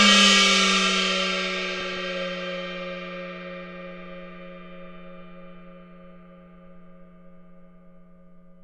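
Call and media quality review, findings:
DAB burbling, 1.65–1.97 s: bubbling, chirpy squelch; spectrogram shows isolated sub-band blocks jumping level frame by frame. Residual reception bit errors corrupting MP2 samples and scale factors.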